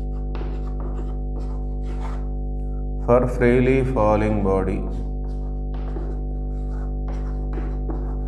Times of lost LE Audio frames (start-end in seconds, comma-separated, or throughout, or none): none